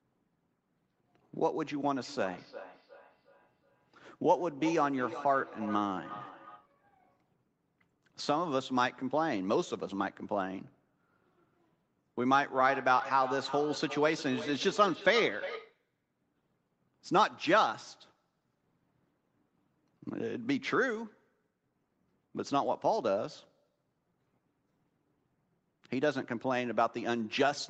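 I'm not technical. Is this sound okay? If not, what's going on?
No. From 1.98 to 6.74 seconds, and again from 12.53 to 15.82 seconds, the speech comes back as a repeat about every 0.4 seconds, the second stretch louder than the first. This is a feedback echo between two devices: two devices in the same room were on one call, one played the other's sound aloud, and that microphone picked it up again. Each device cleans up only its own playback, so the repeat got through.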